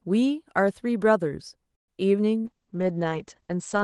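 At 1.75 s a call audio freeze sets in, likely a stalled jitter buffer, leaving about 0.12 s of near-silence. It shows as a flat waveform gap, after which the speech resumes about 128 ms late.

From 2.40 to 2.47 s, short concealed packet loss replaces 40 ms with extrapolated sound. It is a brief smear, visible as blurred, repeated spectrogram texture.

From 2.47 s to the end, a call bitrate drop takes the Opus stream from 32 to 9 kbps. The audio turns rough and muffled, and on the spectrogram the top edge falls from 12 kHz to 8 kHz.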